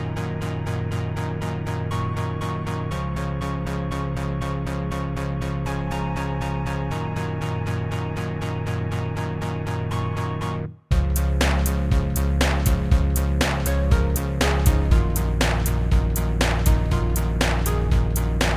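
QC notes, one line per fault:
Nothing stood out on listening to this audio.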